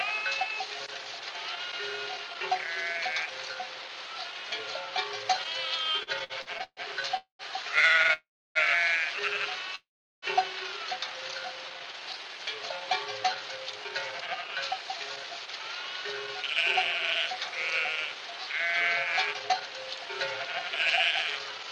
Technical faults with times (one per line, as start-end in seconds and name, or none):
5.83-8.12 repeated stalls (stutter)
7.17-7.42 call audio freeze
8.13-8.58 call audio freeze
9.75-10.25 call audio freeze
11.53-12.34 jitter buffer slow-down
13.58-21.64 jitter buffer speed-up